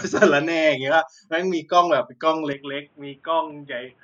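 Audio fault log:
2.53 s to end: input switched to a poorer device, likely; band now stops near 3.8 kHz, level drops about 5 dB, new faint background noise about 40 dB below the signal, sound turns dull.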